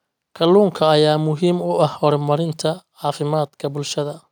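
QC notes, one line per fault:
No audible fault was found on this speech clip.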